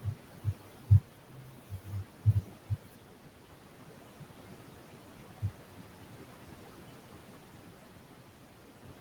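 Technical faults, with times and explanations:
Throughout, noise suppressor artifacts: the room noise, about 11 dB below the speech, is pulled down frame by frame between words and rises under them.
0.0–3.09 s, 3.45–3.58 s, 4.49–4.74 s and 5.35–5.84 s, speech cut by the noise suppressor: quiet speech is mistaken for noise and lowered by up to about 19 dB, leaving parts sounding swallowed or faint, about two seconds' worth in the opening stretch.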